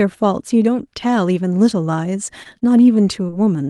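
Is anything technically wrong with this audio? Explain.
Yes. The speech passes through an Opus call path whose top end stops near 12 kHz, consistent with roughly 32 kbps, and it carries four network faults in the last second and a half.

Short stall from a late packet, 2.43 to 2.47 s: a packet arrived after it was due, so the jitter buffer ran dry. The receiver held the last sound for about 17 ms until the packet arrived, then resumed exactly where it left off. Nothing is lost, but the sound lingers a touch too long, with a faint buzz or dip, and everything after is pushed about 17 ms later.

Short concealed packet loss, 2.59 to 2.71 s, 3.26 to 3.30 s, and 3.30 to 3.34 s: in each case about 20 ms of audio never reached the decoder. The receiver bridged the gap by continuing the preceding sound, following its pitch where it was voiced and using shaped noise where it wasn't, then blended back into real audio. 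The first fill adds a few milliseconds. The last two fall back to back, so around 3.3 s the sound briefly smears and wobbles, and a short consonant may drop out.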